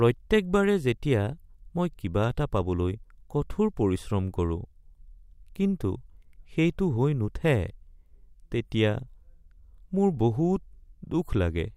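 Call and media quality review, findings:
No faults found in this speech recording.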